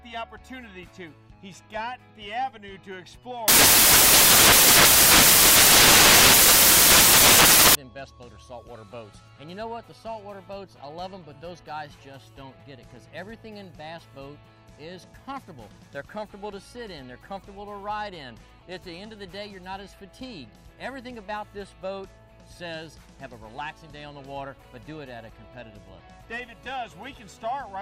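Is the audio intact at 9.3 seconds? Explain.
Yes, at 9.3 seconds the audio is intact, with no dropout, click, distortion or other fault at that point.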